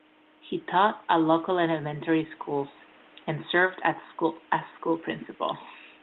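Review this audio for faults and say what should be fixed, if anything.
Nothing stood out on listening to this speech, so there is nothing here that needs fixing.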